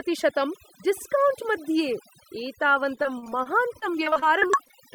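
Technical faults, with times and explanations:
Throughout: overdone noise removal. The noise reducer was pushed too hard, so any frequency band sitting near its idea of the noise floor gets pulled way down or shut off entirely. Between phrases the background drops to near silence, with small twinkly specks where isolated bands flicker back on. The quieter parts of the speech get swallowed along with the noise.
2.95 to 4.82 s: repeated packet loss (robotic sound). Over this stretch, audio keeps dropping out in a quick series of short gaps, the longest about 33 ms. The receiver patches each hole by carrying the last bit of sound forward, which accounts for roughly 312 ms of filler, about 17% of the span. Another 260 ms is simply missing. Because each patch is followed by another so soon, the speech comes out choppy, with chunks gone.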